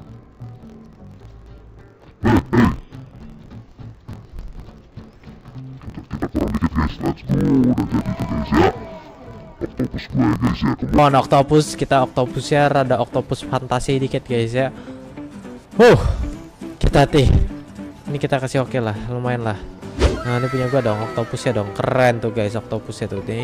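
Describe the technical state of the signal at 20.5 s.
At 20.5 s the signal is intact, with no dropout, distortion, glitch or other technical fault audible at that point.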